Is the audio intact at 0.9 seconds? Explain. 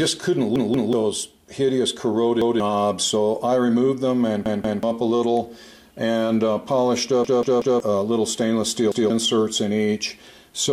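No. A repeated buffer runs from 0.56 to 0.93 s. Audio arrived late, so the device replayed its last 186 ms block twice, which fits an 8192-sample buffer. The stutter loses roughly 0.4 s, and a spectrogram shows identical copied blocks split by sharp vertical seams.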